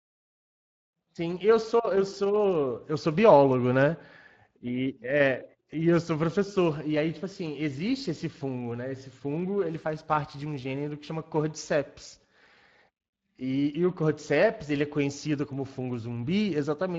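The whole speech clip carries Speex codec damage, and it is plainly audible from start to end. Speex is a CELP speech codec. It rebuilds the voice from a predicted filter and a coded excitation signal. Here the coding sounds like a middle setting, which fits a bitrate of about 20 kbps. There are too few bits to capture the excitation cleanly. So the speech sounds grainy and hoarse, with a noisy edge.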